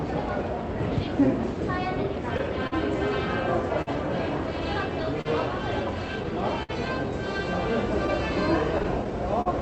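From 0.74 s to 9.12 s the sound has a slightly unsteady tempo, with small hiccups at uneven intervals and everything running at about 99% speed. These are repeated timing corrections. The receiver keeps repeating short slices to stretch the audio, adding roughly a twentieth of a second over the stretch, because it is trying to stay in step with a sender whose clock runs slow.

That clock drift between sender and receiver lasts the whole clip. The sender's clock runs a few percent slower than the receiver's, so the jitter buffer keeps draining and has to be padded out. All the corrections go the same way, lengthening rather than cutting.

Between 2.03 s and 2.74 s the sound drags and stutters three times. Together these pauses fill 67 ms, and the longest is 46 ms. This is repeated stalls (stutter). Packets arrived later than they were needed and the buffer emptied each time, so the receiver carried the last sound forward until data returned. 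Nothing is lost, but the flow catches and holds.

At 3.82 s a sound is held unnaturally long, with a faint buzz or dip lasting 52 ms before it moves on. This is a short stall from a late packet. One packet missed its slot, the delay jumped by 52 ms, and the receiver stretched the preceding audio to cover the wait. It then resumed from exactly the same place, so nothing is skipped.

From 5.03 s to 6.71 s there are brief ticks and smears, roughly four of them, with the longest around 70 ms. A similar run from 8.07 s to 9.48 s has about five, none longer than about 40 ms. These are scattered short gaps. Isolated packets came in late, and the receiver patched each hole by continuing the last sound, about a tenth of a second of patching in each stretch. The top end stops at 8 kHz throughout, which fits the Opus call path at a rate near 32 kbps.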